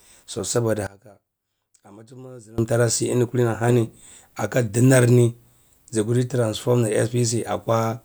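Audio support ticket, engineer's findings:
Speech level drops by about 21 dB from 0.87 to 2.58 s, leaving a faint residue. Probable component is the stereo path or mono fold-down. Likely one channel inverted: centred content cancels when channels are summed, so only inter-channel differences remain.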